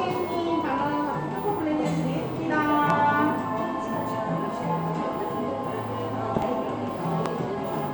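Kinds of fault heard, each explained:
Loud pop: a sudden voltage spike, likely from a switch or static, cracking well above the sound near 2.9 s, twice around 6.4 s, and 7.3 s.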